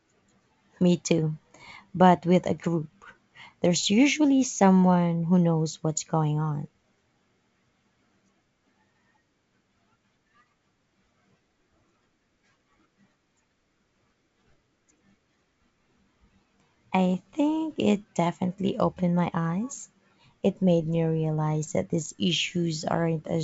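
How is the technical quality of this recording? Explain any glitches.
No glitches or faults are audible.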